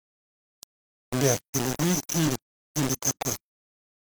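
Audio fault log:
Throughout: low bit depth without dither. The speech sounds coarse and gritty all the way through, and the grit rises and falls with the voice instead of sitting as a steady hiss. The error is loud, roughly 10 dB below the signal. Quiet stretches break up or collapse toward silence. The likely cause is audio reduced to about 3 bits and rounded with no dither. With so few steps, each sample snaps to a distant level, so the error tracks the waveform itself.
2.23 to 2.29 s: damaged data in a compressed stream. A short chirp, squawk, click or hole cuts into the speech for about 60 ms. Here part of the compressed data is wrong, so the decoder misreads those frames. It briefly outputs garbage or loses its place, then locks onto the next good frame header and resumes. That brief misdecoding is what produces the disturbance.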